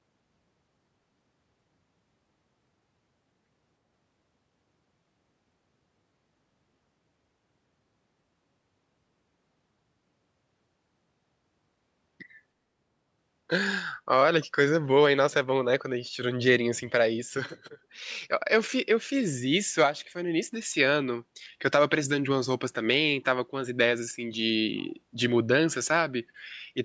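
From 0.18 s to 26.83 s, clock slip clicks run through the speech as a soft, steady rattle of faint ticks, roughly ten per second and around three hundred in total. They are clearest on louder, sustained speech and vanish in pauses, and the call-style processing leaves nothing above 8 kHz. The likely cause is two unsynchronised clocks differing by roughly 200 ppm, forcing a single sample to be dropped or repeated at each slip.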